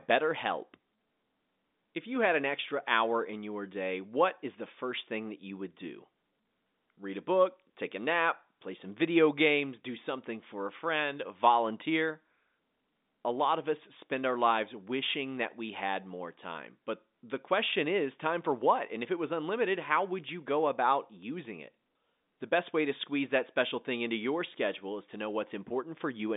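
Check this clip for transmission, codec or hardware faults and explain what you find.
No faults found: the speech sits in an ordinary G.711 A-law telephone channel at 64 kbps, passing roughly 200 Hz to 3.7 kHz with nothing above 3.8 kHz, as that line is meant to.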